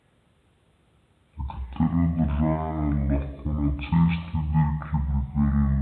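From start to finish the speech plays at half speed and a full octave low, 12 semitones down, the signature of a wrong sample rate. The samples are being clocked out at roughly half their intended rate with no conversion, which fits a 44.1 kHz recording played at about 22 kHz. Voices come across deep, drawn out and sluggish. Unlike a pitch shifter or time-stretch, which alter only one dimension, here speed and pitch drop together by the same ratio.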